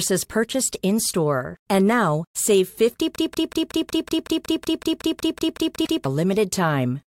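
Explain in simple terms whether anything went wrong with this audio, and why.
Right after "now save", the computer froze while the sound hardware kept replaying the same small stretch of memory. This is a system hang loop. From 3.16 to 6.05 s, one 186 ms scrap of speech repeats 16 times, about 5.4 times per second, in a machine-gun stutter. The loop length fits an 8192-sample buffer, and roughly three seconds of real speech are lost.

Inside that stutter, from 5.84 to 5.87 s, there is a brief damaged spot lasting about one 26 ms compressed frame. The likely cause is a broken MP3 bit reservoir: a frame went looking for data it had borrowed from an earlier frame and found the wrong bytes instead.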